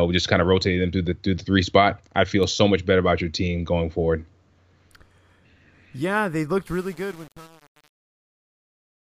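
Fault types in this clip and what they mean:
Truncation distortion on a fade: after "they looked", the fade-out turns gritty, which fits an undithered 7-bit level stage.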